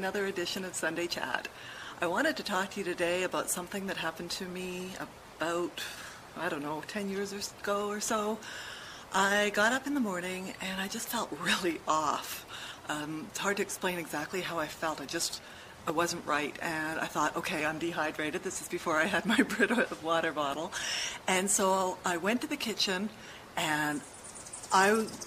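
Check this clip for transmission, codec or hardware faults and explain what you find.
Nothing in the signal points to a transmission, codec or hardware problem; level, continuity and bandwidth stay steady throughout.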